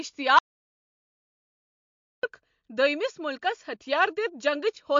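From the first moment the speech carries plainly audible MP3 compression. Nothing reaches above 7.2 kHz, so the top end sounds dull, and the remaining detail has a watery, swirling quality as weak frequency components flicker in and out between frames. The likely cause is an encoder starved of bits, which fits a rate of roughly 48 kbps. On a spectrogram this shows as a hard ceiling at 7.2 kHz with patchy, blotchy energy below it.

At 0.39 s the audio drops out to silence and stays gone until 2.23 s, so about 1.84 s of speech is lost. The gap is total, with no room tone underneath, which points to the input likely being lost while the recorder kept writing silence. On a waveform it appears as a flat line between those two times. On a spectrogram it is a blank vertical band cutting through the whole frequency range.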